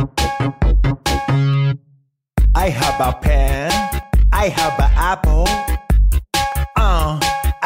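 At 1.54 s, 4.03 s and 6.52 s the sound skips forward abruptly, each time losing a very brief slice of only a few milliseconds, with the two sides butted together and no gap of silence between them. The skips repeat every 2.5 s, a regularity that points to audio missing between chunks: the recorder or processing chain likely handles the signal in 2.5-second blocks and drops a sliver at each block boundary.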